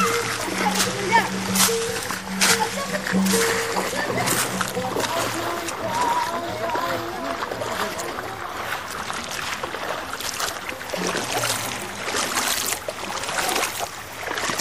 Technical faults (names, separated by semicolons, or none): MP3 compression